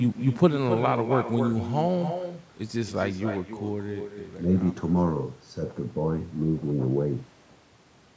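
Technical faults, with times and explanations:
Throughout, echo with no canceller: each phrase returns about 300 ms later, about 8 dB down, from the far-end loudspeaker; the spectrogram shows every syllable trailed by a fainter, smeared copy.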